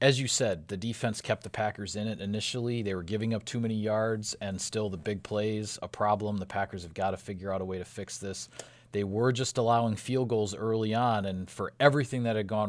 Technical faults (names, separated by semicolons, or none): none